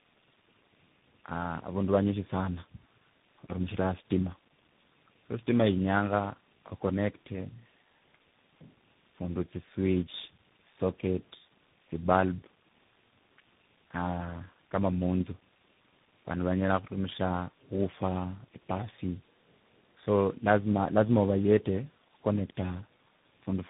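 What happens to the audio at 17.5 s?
At 17.5 s the speech carries tandem speech coding, which runs through the whole clip rather than starting there. The roughness, warble and muffling point to about three speech coders in a row, plausibly GSM full rate, then G.729A, then CVSD, with G.711 links between. Each coder re-encodes the previous one's damaged output, so artefacts stack. Nothing reaches above 3.8 kHz, giving a dull, band-limited sound.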